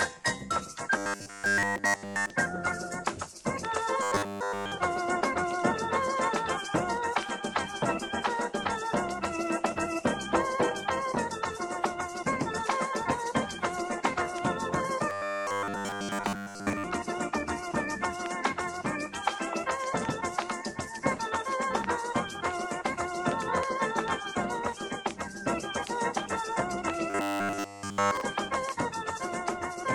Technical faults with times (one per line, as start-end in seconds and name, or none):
0.98-2.30 robotic sound from repeated short buffers
4.03-4.72 robotic sound from repeated short buffers
15.10-16.84 robotic sound from repeated short buffers
27.10-28.21 robotic sound from repeated short buffers